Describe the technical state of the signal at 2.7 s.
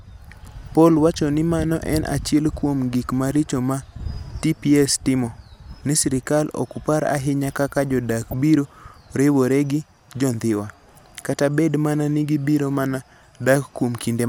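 At 2.7 s the speech signal is intact, with no dropout, clipping, distortion or other technical fault audible at that moment.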